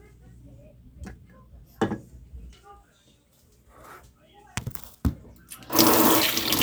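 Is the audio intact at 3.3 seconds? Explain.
No. At 3.3 seconds the sound is within a run of regular clicks, one every 0.6 s from 0.58 to 6.58 s. These are clock drift buffer slips, likely from two clocks about 500 ppm apart, dropping or repeating a small block of samples each cycle.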